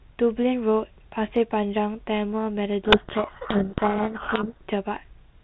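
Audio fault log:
2.84–4.59 s, codec payload misread: for about 1.75 s the speech is buried under harsh, grinding distortion. The decoder is reading the G.726 code words with their bits in the wrong order, so each sample's prediction difference is rebuilt from scrambled values and the adaptive predictor chases nonsense. The speech returns at 4.59 s, when both ends are unpacking the bits the same way again. Outside that span the 32 kbit/s telephone-band coding carries only a light trace of its own noise.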